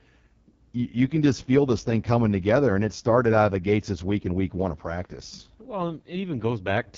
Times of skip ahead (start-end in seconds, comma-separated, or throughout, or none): none